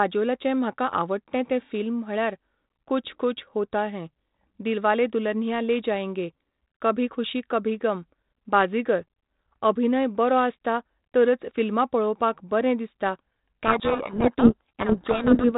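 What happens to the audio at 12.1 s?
Nothing goes wrong at 12.1 s: the speech carries straight through that moment without any dropout, click or sudden change, heard through the steady 4 kHz band limit and light added hiss of 32 kbit/s G.726 ADPCM.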